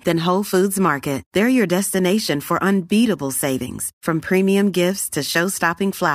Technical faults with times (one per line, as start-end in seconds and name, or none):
none